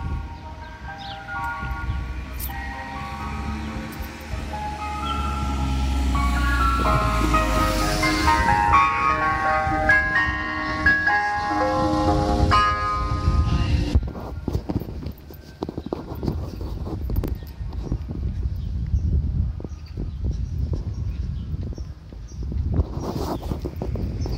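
At 17.16 to 17.28 s, chunks out of order: one 40 ms block plays two blocks late, after the two that should follow it. The moment sounds jumbled, with three hard joins. Unlike a dropout, no sound is missing, only reordered.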